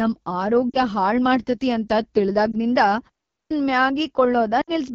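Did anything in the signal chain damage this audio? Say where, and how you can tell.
Yes. AMR wideband (HD Voice) codec damage runs through the whole clip at the codec stage. The speech sounds rough and raspy, which fits one of the lowest AMR-WB modes, around 8.85 kbit/s. The pulse-excited vocal tract model has too few bits to capture the voice cleanly.

Lost AMR speech frames occur in the network and radio stage at 0.70 to 0.81 s, at 2.51 to 2.56 s just after "ಮಾಡ್ತತಿ ಅಂತ", and at 4.61 to 4.71 s. The single lost frame is a brief dip or warble, and the longer runs drop to near silence. Their lengths fit runs of two, one and three 20 ms frames concealed by repeating the last good parameters with falling gain.

A clipped start after a pause happens at playback at 3.31 to 3.51 s. After a 0.3 s pause, the sound resumes abruptly with its first sounds missing, about 0.2 s swallowed. The output device was still waking or relocking when the audio returned.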